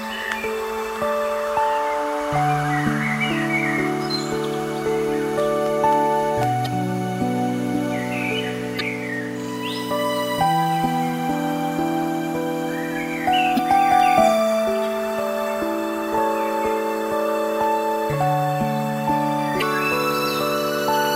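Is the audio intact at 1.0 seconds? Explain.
Yes, at 1.0 seconds the audio is intact, with no dropout, click, distortion or other fault at that moment.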